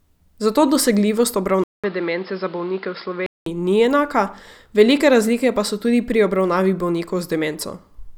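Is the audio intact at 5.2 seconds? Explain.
Yes, at 5.2 seconds the speech plays through cleanly, with no dropout, click, distortion or other fault to be heard at that moment.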